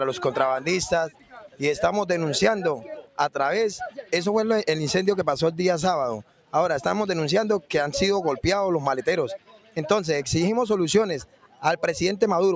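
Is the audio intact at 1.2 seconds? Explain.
No. At 1.2 s the audio sits inside a stretch of sound cut by the noise suppressor, running from 1.1 to 1.6 s. A speech-tuned suppressor judged the sustained part of the sound there to be noise and pulled it down, at its deepest by about 12 dB, over roughly 400 ms in total. Held and fading parts sink or have their decay clipped short, while any sharp onsets come through largely intact. That uneven treatment separates it from a dropout or a simple gain dip, which would take everything down evenly.

This dip sits within a broader fault present across the whole clip: a noise suppressor applied to music or sounds. The same processor keeps treating steady tone, ambience and tails as noise, so the level swings by something like 10 dB, giving a pumping, fluttering, thinned character.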